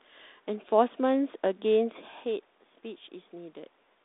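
Nothing technically wrong turns up in this speech recording; it's fine all the way along.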